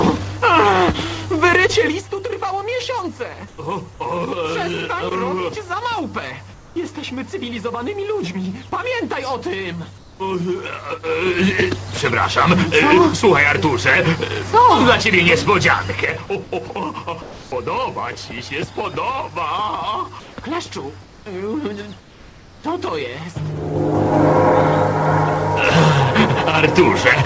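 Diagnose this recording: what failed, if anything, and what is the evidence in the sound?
Comfort noise in place of the background at 3.48–3.58, 6.54–6.76, 9.98–10.20, 16.44–17.52 and 20.20–22.64 s, in call processing: the real background, about 25 dB below the loud passages, becomes flat, featureless hiss. It is about 5 to 6 dB quieter in the first three gaps. The likely cause is that the sender paused transmission and the receiver synthesised noise in its place.

Zipper noise from 11.01 to 11.61 s, at a gain stage: a level change of roughly 10 dB arrives in 3 dB jumps, about seven per second, with no smoothing between them. Each jump clicks, so a ticking rides on the sound while the level moves.

Sound dropped by the voice detector at 16.68 s, within the 16.44 s comfort-noise stretch: about 20 ms of sound disappears into the synthetic noise. The likely cause is that the sender's detector took that moment for background and stopped sending until it triggered again.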